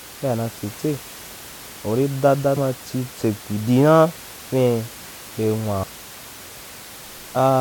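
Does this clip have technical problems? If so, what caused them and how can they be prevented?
Yes, there's a short glitch from damaged data in a compressed stream at 2.56 s, right after "uri da da" and before "ma chi": corrupted bytes threw the decoder off, so it lost sync and skipped ahead to the next good frame header, with the room noise about 19 dB down. To prevent it, send the stream over a checksummed, error-corrected transport and keep metadata out of the audio frames.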